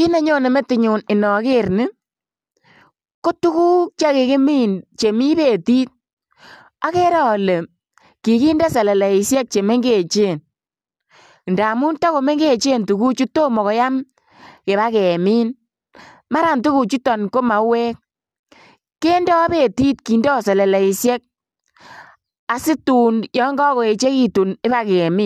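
Nothing in the speech stood out as a technical problem on listening.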